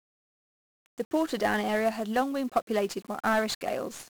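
Throughout the speech, a dense fuzzy crackle and hiss bury the treble: heavy 1-bit DFPWM compression, one bit per sample, consistent with a rate near 48 kbps.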